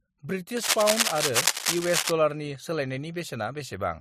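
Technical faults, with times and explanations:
0.57 to 2.11 s, cable scratch noise: A burst of scratching and rustling sits over the speech for about one and a half seconds. It is dense and uneven, and it is roughly as loud as the speech itself. The likely cause is a worn cable, connector or control being moved. Its contact resistance then jumps about rapidly. Each jump throws a small spike into the signal, and many together make the rough, crackling texture.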